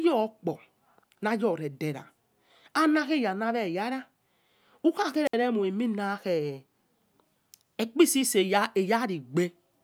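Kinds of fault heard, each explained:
Wireless microphone squelch dropout: the radio link from an analogue FM microphone weakens until the receiver's squelch mutes its output. Here the speech breaks at 5.25 s with a short swell of hiss, then falls into near silence for about 61 ms before resuming by 5.34 s. On a waveform it appears as an abrupt flat gap within the speech. A spectrogram shows a smear of broadband noise just before a blank vertical strip spanning all frequencies.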